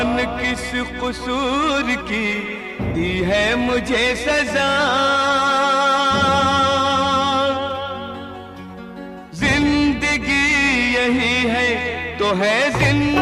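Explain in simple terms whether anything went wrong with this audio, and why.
Something did go wrong, from about 2.28 to 8.01 seconds. This is a call bitrate drop. The connection seemed to weaken, so the call was told to send far less detail. The system saved data by describing the sound more roughly and dropping its brightest, highest parts. That makes the audio sound muffled and watery. At its worst, for about 1.4 seconds, it is at its roughest. After 8.01 seconds the fuller sound returns.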